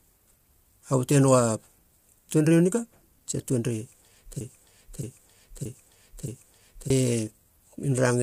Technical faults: low-delay AAC compression; broken-record loop

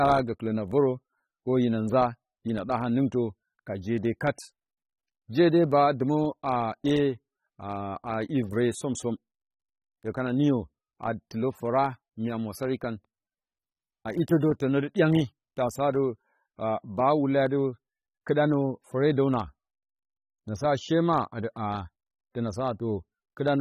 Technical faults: AAC compression

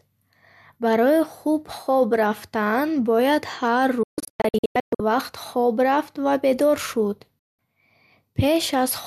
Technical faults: digital broadcast dropout

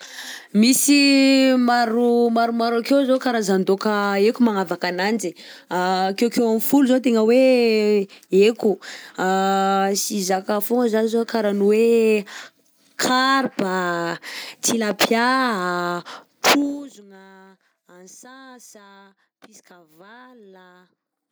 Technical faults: zipper noise

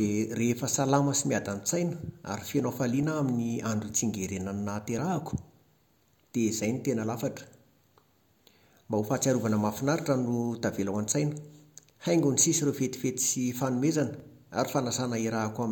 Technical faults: dropped buffer (overrun)

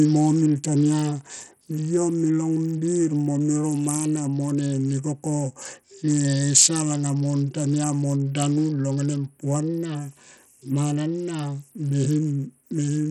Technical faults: Bluetooth SBC compression

